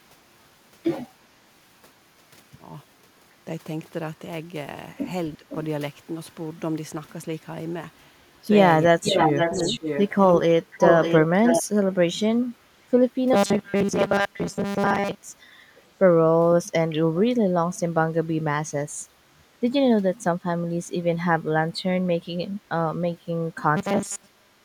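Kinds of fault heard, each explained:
Speech suppressed in double talk: The speech briefly dips, by around 10 to 20 dB, at 5.37, 8.88 to 10.45, 12.53, 19.3 to 20.88 and 23.17 s. These dips likely come from an echo canceller turning down the local talker while the far side was also speaking.
Echo leak: A delayed copy of the speech returns about 0.5 to 0.6 s later. It is faint scraps at 5.49 and 15.76 s, and as loud as the speech itself from 9.05 to 11.63 s. The likely cause is an echo canceller failing to remove loudspeaker pickup.
Robotic sound from repeated short buffers: From 13.33 to 15.15 s and from 23.77 s to the end, the speech becomes a rigid, metallic 200 Hz buzz. Most of the sound there is repeated, which fits a 5 ms buffer being looped, likely because new audio arrived too seldom.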